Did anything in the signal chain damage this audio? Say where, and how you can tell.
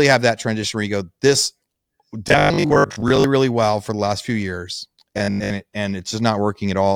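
Yes. Robotic sound from repeated short buffers appears from 2.28 to 3.24 s, ending just before "really well for the", and again from 5.18 to 5.56 s, right after "the last few years". The speech turns into a rigid metallic buzz at 50 Hz, meaning a 20 ms block repeats, and about half the audio is repeated rather than new. A spectrogram shows evenly spaced 50 Hz harmonic stripes, and the waveform shows identical 20 ms cycles. The likely stage is a starved driver buffer repeating its last block.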